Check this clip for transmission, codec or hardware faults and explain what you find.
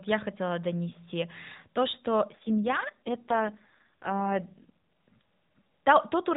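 One fault is present: an AMR rate drop between 2.36 and 4.69 s, heard over a narrowband mobile path with light coding roughness. Across that stretch the speech turns buzzier and more synthetic, then recovers. The band stays capped at 4 kHz and nothing drops out. The change in texture points to the codec moving from its 12.2 kbps mode to 4.75 kbps, with bits shifted from describing the voice to protecting it against errors on a weak link.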